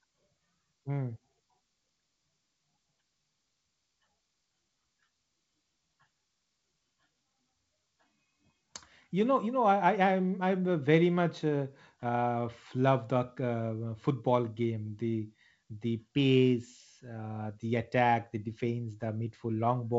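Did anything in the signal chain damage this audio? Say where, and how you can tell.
No, the speech has passed through G.722 wideband telephone coding working as intended, with nothing above about 7.7 kHz and only the light upper-band hiss and slight lower-band grain that fit the 56 kbit/s mode.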